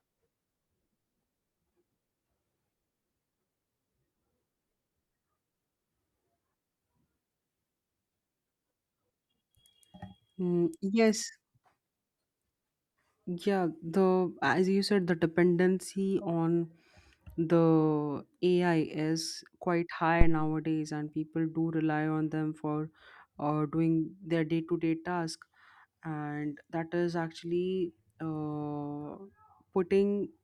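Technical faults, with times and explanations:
20.21 to 20.47 s, phantom power thump: a deep thump just before "and people do rely", peaking at about -8 dBFS and dying away within roughly 58 ms, as a supply switching on or off on a live input sends a voltage step through the coupling capacitors. The waveform shows one large low-frequency swing; the spectrogram shows a dark band confined to the bottom octaves.
Corrected:
20.21 to 20.47 s, phantom power thump: a deep thump just before "and people do rely", peaking at about -8 dBFS and dying away within roughly 58 ms, as a supply switching on or off on a live input sends a voltage step through the coupling capacitors. The waveform shows one large low-frequency swing; the spectrogram shows a dark band confined to the bottom octaves.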